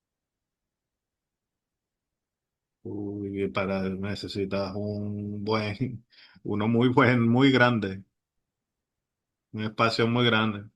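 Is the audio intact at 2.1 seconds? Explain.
No. At 2.1 seconds the audio sits inside an adaptive stream starting at a low bitrate, which runs from 0 to 6.0 s. The player began on a cheap version while measuring the connection. Treble is thin and codec smearing is stronger, which fits a 24 kbit/s Opus stream. Quality jumps cleanly at 6.0 s.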